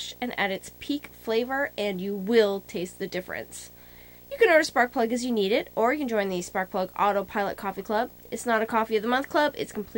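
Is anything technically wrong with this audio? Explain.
Yes. A video or display buzz runs through the entire clip. Interference from a screen or video cable has leaked into the audio path, producing a buzz at the 59.94 Hz field rate with a gritty hash above it and a whine near 15.7 kHz from the line scanning, sitting very roughly 25 dB under the signal. A spectrogram shows a constant line at 59.94 Hz with a ladder of harmonics, plus a thin steady trace at 15.7 kHz.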